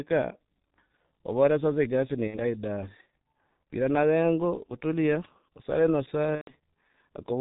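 Speech heard through the G.723.1 codec throughout, heavily damaged: nothing above 4 kHz, a hoarse, muffled tone, and smeared consonants. This fits a low rate near 6 kbit/s and a voice model that updates only every 30 ms. A simple low-pass filter would dull the sound but leave it clean, without this rasp. VoIP packet loss concealed by the speech codec occurs at 2.27 to 2.39 s and 6.35 to 6.52 s. The sound is stretched into a fading, extrapolated fill, the second gap falling silent after its first two frames, and stays weak just after each gap. The first gap points to about two 30 ms frames lost, the second to about four.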